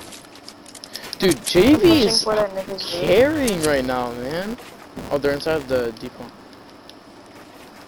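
Filter restarted on every block, throughout the clip: the filter drops its internal state at each block boundary and starts again from silence, leaving a small transient every time. These repeat as a 200 Hz buzz, pointing to blocks about 5 ms long, and grow louder and quieter with the sound.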